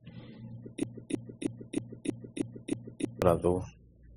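A speech recording that carries the layered artefacts of transcoding between lossy codecs from start to finish. Nothing is present above 12.9 kHz, and the texture mixes several kinds of coding damage, which fits a chain of WMA at a moderate rate, then Opus, then MP3 at a low rate. Each later stage likely re-encoded the earlier artefacts and added its own, while the lowest bandwidth in the chain set the final cut-off. From 0.83 s to 3.22 s there is a broken-record loop. A fragment of about 0.32 s repeats exactly, back to back, eight times, and the audio that belonged in that span never plays. The likely cause is a player, encoder or stream that stalled and kept sending the last fragment it held.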